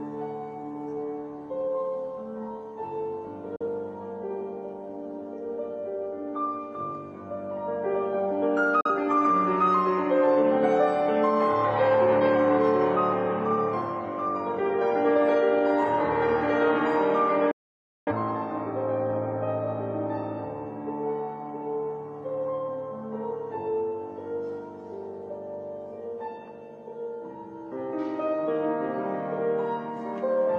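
The audio has three digital broadcast dropouts, at 3.56–3.66 s, 8.81–8.90 s and 17.51–18.12 s, where the receiver mutes through a 3 ms fade after frames fail. The short gaps suggest one lost frame each, the long one about 0.55 s. Unlike concealment, nothing is repeated or smeared. The sound simply stops.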